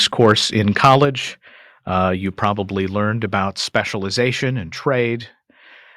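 Input gain that is likely set too high drives the loudest speech peaks past the converter's ceiling at 0.21 to 0.33 s and again at 0.84 to 0.96 s. The flattened tops give this microphone overload a harsh crackle, about 4 dB over at first, then about 6 dB. The clipped share is roughly 2 percent, then roughly 5 percent. At 1.05 s the microphone volume is stepped down, likely by call software reacting to that clipping. Voice and background fall together by about 4 dB. A second, smaller step of about 1 dB follows at 3.48 s.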